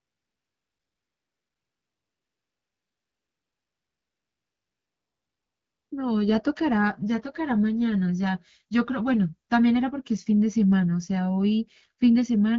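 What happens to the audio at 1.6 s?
AMR comfort noise covers 1.6 s, part of a stretch from 0.00 to 5.91 s where no speech frames arrive. The sending phone judged the talker silent and stopped transmitting speech, so the receiver generated synthetic noise from a rough estimate of the background's level and spectral shape. At 1.6 s the real background is replaced by a steady, smooth hiss.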